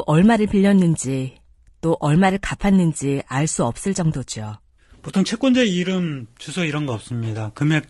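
From start to finish the speech sounds rough and grainy, with a hiss-like texture filling the gaps between the pitch harmonics and a top band that sounds thin and somewhat synthetic. This damage is plainly audible and likely comes from low-delay AAC compression of the AAC-ELD kind used for calls. Its short frames resolve the harmonics coarsely and spend bits fast, and the coarseness heard here fits a bitrate around 32 kbps.

Between 5.11 and 5.14 s the sound briefly dips, fading down and back up. This is AAC frame loss with muting. A block of about 20 ms of coded audio never reached the decoder, which points to a single lost frame. The decoder replaced that frame's spectrum with silence, and the overlapping windows of the neighbouring frames smoothed the edges into a fade rather than a hard cut.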